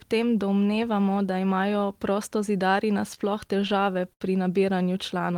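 Packets in this speech clip reached the receiver late or slower than playback, so the jitter buffer ran dry ten times between 3.01 and 4.23 s, just after "domnevamo da imajo prostozidarji". That produces repeated stalls (stutter): the last sound is stretched across each gap, the longest about 71 ms, adding roughly 170 ms of filler with nothing lost, so the passage drags and hiccups.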